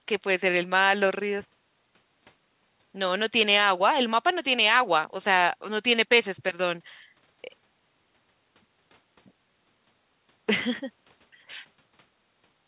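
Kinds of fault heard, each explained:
No faults found; the speech carries nothing above 4 kHz, consistent with a narrowband call path such as G.711 mu-law at 64 kbps.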